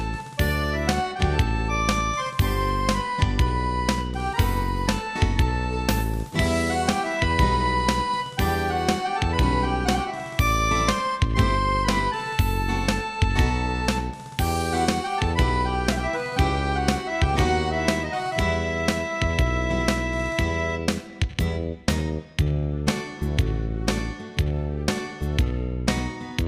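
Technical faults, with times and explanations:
No technical faults detected.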